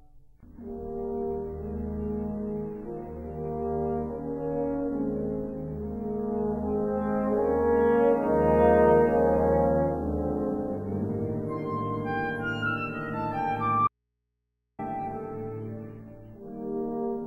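At 13.88 s the sound drops out abruptly and doesn't return until 14.79 s, about 0.91 s later. It's an audio dropout to a faint residue: the gap holds only mains hum, roughly 55 dB below the signal, so the path downstream likely stayed live while the source was lost.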